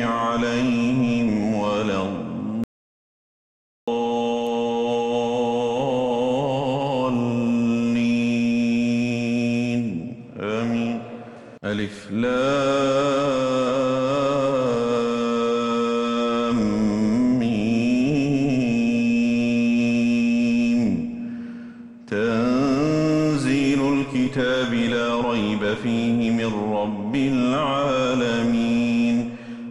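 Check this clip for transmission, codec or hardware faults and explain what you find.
One fault stands out: an audio dropout to silence from 2.64 s to 3.88 s. The sound cuts off abruptly mid-flow and returns just as suddenly, and for those 1.24 s there is nothing at all, no room tone left. That dead silence points to the input signal being lost while the recorder kept writing silence, likely from a brief disconnection, failed link or momentary mute. Whatever occurred during the gap is unrecoverable.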